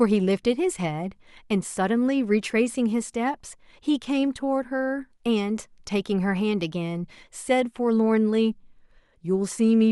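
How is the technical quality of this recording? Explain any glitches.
The speech recording has no audible technical glitches: the signal stays continuous and stable throughout, with nothing that points to a fault in capture, transmission or playback.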